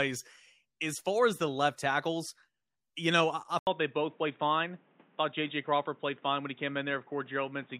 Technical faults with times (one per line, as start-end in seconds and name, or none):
3.59-7.79 input switched to a poorer device